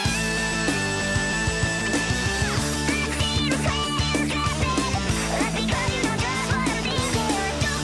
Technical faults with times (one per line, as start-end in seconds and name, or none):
0.00-7.83 wrong sample rate